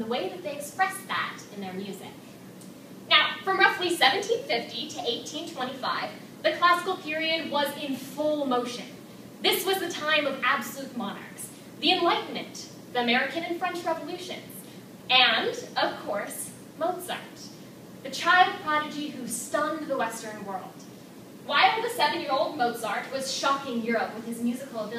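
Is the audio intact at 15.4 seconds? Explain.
Yes, the audio is intact at 15.4 seconds, with no dropout, click, distortion or other fault audible at that point.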